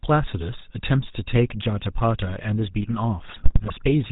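GSM full-rate codec damage runs through the whole speech clip, plainly audible as a buzzy, gravelly roughness with nothing above 4 kHz, consistent with 13 kbps full-rate coding that models the vocal tract and drives it from a coarse, regularly spaced pulse excitation. GSM bit errors strike from 3.29 to 3.74 s, where corrupted filter, pitch and gain values reach the decoder, warping the spectrum and spiking the level frame by frame, so the sound breaks into squawks, pops and gargling.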